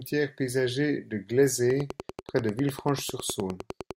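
From 1.70 s to 3.92 s, just after "paysager de", a train of clicks runs over the speech. About twenty sharp, similar pulses arrive regularly, ten per second, peaking around 10 dB above the voice. Likely cause: interference or a faulty connection or power supply.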